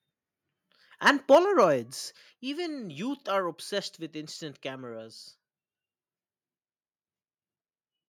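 From 1.06 to 1.64 s the speech shows microphone overload: peaks run about 5 dB past the converter's ceiling and a small fraction of samples are flattened. The likely cause is input gain set too high, which leaves a harsh, crackly edge on the loudest syllables. At 1.35 s, in the middle of that distortion, the microphone volume is stepped down by about 4 dB, and a second step of about 4 dB follows at 2.34 s. Both are likely automatic gain reductions by the call software, and each produces an abrupt drop in the level of the speech and the background together.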